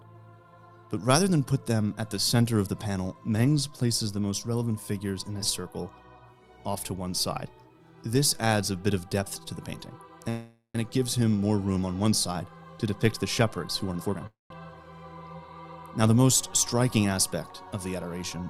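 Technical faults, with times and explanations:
10.29 to 10.77 s, call audio freeze. The sound stops moving forward for about 0.45 s. The last sound carries on as a fading buzz or hiss, then about 0.13 s of silence. Nothing is lost. The audio resumes where it stopped, now about 0.45 s later. The likely cause is packets held up in transit, which left the jitter buffer empty.
13.88 to 14.24 s, jitter buffer speed-up. The audio runs at nearly twice normal speed, 193%, but the pitch stays the same. It sounds hurried. The receiver cut many short pitch-period pieces in a row, removing roughly 0.3 s in total. This shrinks a buffer that had grown too full.
14.27 to 14.52 s, call audio freeze. The audio halts again and is filled for about 0.23 s, ending in about 0.17 s of silence. It then continues without loss, about 0.23 s behind.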